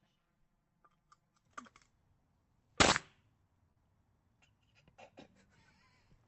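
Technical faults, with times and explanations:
0.00–1.49 s: channel delay (comb filtering). One channel lags by about 5 ms, and summing to mono cancels around 100 Hz and at regularly spaced frequencies above it. This sounds hollow and shows as fixed dark horizontal bands on a spectrogram.
3.71–3.78 s: burst of packet loss. About 45 ms of the last sound is stretched and faded, then playback jumps ahead, skipping 40 ms. This shows on a spectrogram as a smeared, dimming patch that ends in an abrupt edge.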